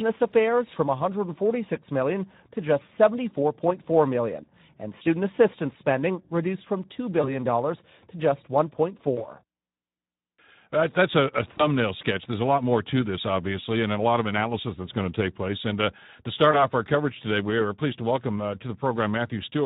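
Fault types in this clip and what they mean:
Speex codec: A low-rate CELP coder, consistent with a setting around 11 kbps, leaves the speech hoarse and noisy throughout. On a spectrogram, harmonics look smeared and grainy, with any upper band filled by diffuse shaped noise rather than clear structure.
VoIP packet loss concealed by the speech codec: At 7.21, 9.15, 11.57 and 16.51 s, a lost 20 ms stretch is patched by extrapolation, giving a brief fading buzz or coloured noise for about 0.1 s. The waveform shows repetitive, decaying cycles; the spectrogram shows frozen, flattened harmonics.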